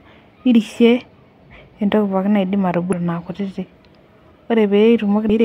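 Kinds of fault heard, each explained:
Damaged data in a compressed stream: corrupted bytes in the encoded speech make the decoder misread the affected frames and lose sync until it finds the next valid frame header. Here it produces a very brief glitch at 2.93 s and a longer one from 5.30 to 5.33 s.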